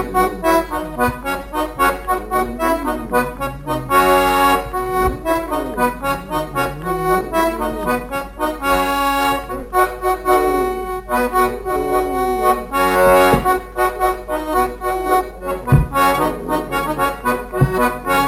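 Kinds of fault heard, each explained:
Imaging from sample-and-hold upsampling: samples were repeated without smoothing, fitting a rise from about 22 kHz to 44.1 kHz, so a mirrored spectrum fills 11.03 to 22.05 kHz at about 24 dB down. Unlike hiss, the fizz follows the sound's level.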